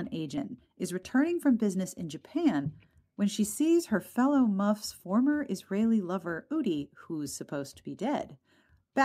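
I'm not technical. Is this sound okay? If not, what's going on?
No. A skip ahead happens at about 0.37 to 0.39 s. Nearly half a second of speech was thrown away during delivery, so playback jumps straight from one point to a later one with no pause, and that piece of speech is simply missing.

Right after, from 0.47 to 1.11 s, there is a jitter buffer speed-up. Too much audio had piled up waiting to play, so tiny slivers were trimmed out again and again. The speech runs about 10% faster at the same pitch and sounds rushed.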